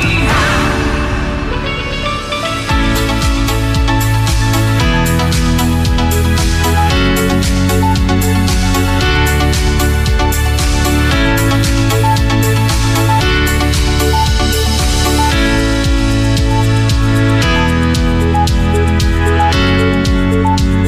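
Nothing here goes wrong at any point, so there's nothing to flag.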